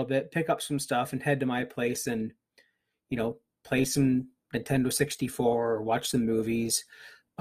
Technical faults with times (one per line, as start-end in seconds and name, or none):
1.58-7.40 adaptive stream at a lower bitrate
4.92 dropped samples